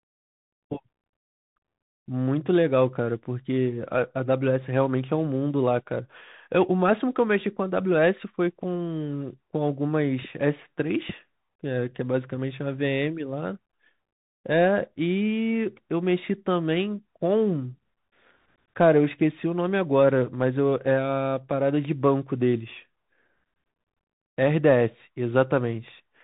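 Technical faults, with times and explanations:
Throughout, Bluetooth CVSD headset codec: the speech is squeezed into the narrowband headset link, with nothing above 3.8 kHz, so it sounds boxy and phone-like. The damage is plainly audible. Each sample is just a single up-or-down bit chasing the waveform with an adapting step, so sharp, loud high content outruns it and smears, s sounds come out scratchy, and a grainy hiss sits under everything. That all fits a 64 kbps CVSD stream.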